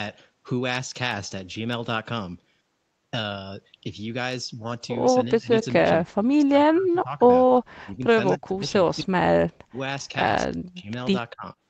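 From 5.37 to 7.21 s the speech dips and breaks apart, about 30 dB down at worst: speech suppressed in double talk, likely from the echo canceller muting this talker while the far side spoke. The waveform shows collapsed stretches, and the spectrogram shows blank gaps.

Inside that span, at 5.62 to 5.66 s, a brief echo leak appears as a faint scrap of the voice returning about 247 ms late, roughly 20 dB below the speech. It is likely residual loudspeaker pickup the canceller missed. On a spectrogram it is a thin, delayed ghost of earlier harmonics.

The same suppression returns at 7.83 to 9.11 s, 9.66 to 9.79 s, 10.47 to 10.89 s and 11.32 to 11.46 s, with drops of about 30 to 40 dB. Each one appears as a sudden notch in the envelope.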